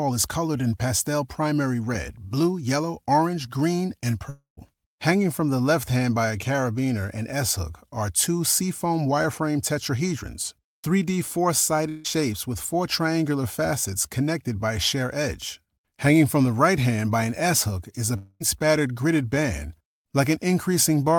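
At 4.29 to 4.59 s, 11.89 to 12.06 s and 18.16 to 18.42 s, the sound smears into a fading buzz, about 280, 160 and 240 ms lost, likely a long network dropout. Spectrograms show frozen, decaying bands; the first gap ends in 120 ms of flat silence.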